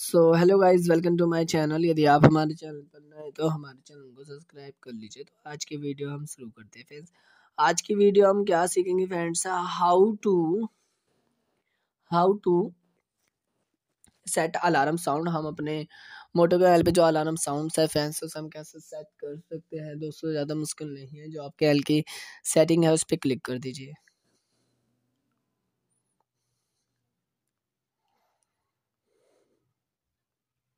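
Nothing is technically wrong with this audio.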